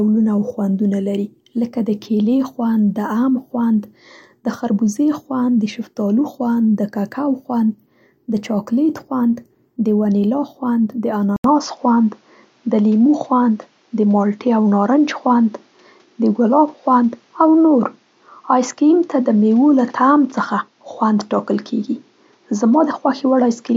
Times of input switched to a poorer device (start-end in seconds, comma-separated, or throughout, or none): 11.36-23.77